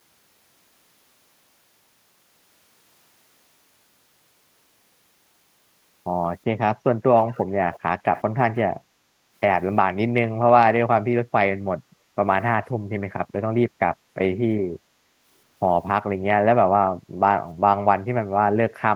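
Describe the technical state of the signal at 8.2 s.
At 8.2 s one side's echo canceller likely failed to fully suppress what its microphone picked up from its loudspeaker, so an echo leak passed back into the line from 8.15 to 8.23 s. The result is a brief, faint scrap of the speech returning 373 ms after the original, sitting roughly 25 dB beneath the direct speech and heard as a delayed ghost rather than a full repeat.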